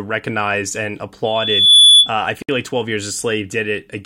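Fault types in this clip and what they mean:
Loudspeaker feedback squeal: The microphone is hearing the loudspeaker it drives, and at one frequency the round-trip gain climbs past unity, so that component keeps reinforcing itself. Right after "recognized and", at 1.24 s, a pure tone at 3.4 kHz appears and swells over roughly half a second to sit about 15 dB above the speech. It holds as a piercing squeal until it breaks off at 2.11 s.
Gap at a join of encoded pieces: The audio was encoded in separate segments and spliced without removing the encoder's start-up delay or the padding on each segment's final frame, so that dead air remains at the seam. At 2.42 s a 64 ms silence cuts into the running speech, its edges softened by the codec. The speech then resumes exactly where it stopped, with nothing missing.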